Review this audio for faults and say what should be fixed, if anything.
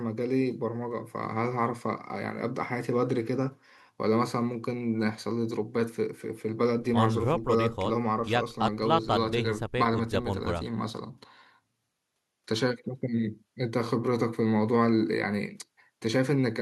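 No faults turn up in this audio, so nothing needs to be fixed.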